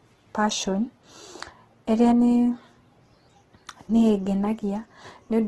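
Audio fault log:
throughout, Opus compression: the speech sounds rough and grainy, its tones smeared into noise, likely from Opus in music mode at a rate fitting about 12 kbps, filling starved bands with folded or noise content. A spectrogram shows speckled harmonics and nothing above 12.3 kHz.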